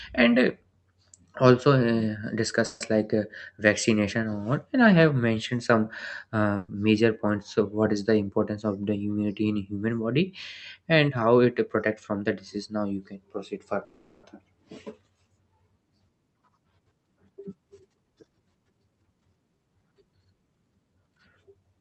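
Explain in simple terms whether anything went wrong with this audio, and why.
A call audio freeze happens at 2.65 to 2.82 s, just before "like uh vaccination or", and again at 13.84 to 14.25 s, right after "now you can proceed". The likely cause is that incoming packets were held up, so the receiver ran out of audio and stretched the last sound into a fading buzz or hiss for about 0.15 s and then 0.39 s. Nothing is lost. The sound picks up where it stopped, just later.

A burst of packet loss hits at 6.56 to 6.70 s, just before "major points of what". About 0.12 s of audio never arrived in time. The receiver filled the hole by carrying on the last sound and fading it down. When the sound resumes, it has skipped ahead, and the piece that should have been there is simply gone.

A jitter buffer speed-up runs from 16.34 to 19.35 s. Audio had piled up waiting to be played, so the receiver trimmed many tiny slices to catch up, taking out about 0.4 s in total. 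The speech there plays about 13% faster, yet the pitch stays the same. The result sounds rushed rather than squeaky.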